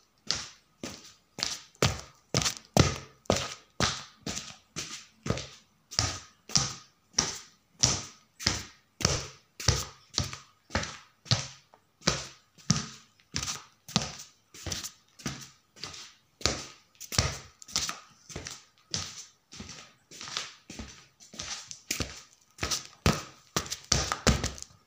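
At 9.16 s the sound jumps forward slightly, with no gap of silence. That's most likely a dropped buffer (overrun): the samples weren't collected before being overwritten, so a few milliseconds vanished and the two edges got spliced straight together.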